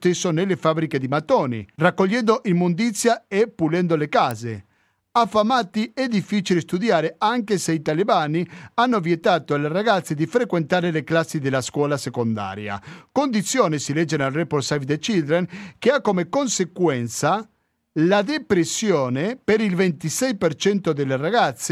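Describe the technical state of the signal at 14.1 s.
At 14.1 s the signal is intact, with no audible technical fault at that point in the speech.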